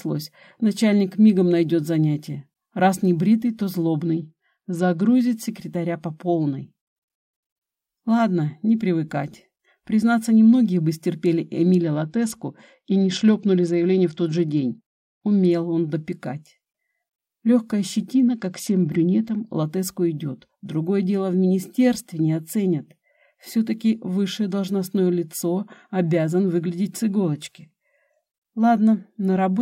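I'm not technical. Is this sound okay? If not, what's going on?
No. Three times, from 4.0 to 5.2 s, 11.8 to 15.5 s and 18.1 to 19.4 s, a Bluetooth SBC bit pool drop makes the sound turn dull and gritty as the wireless link saves data. Unlike a dropout, it never goes silent. Clarity returns afterwards.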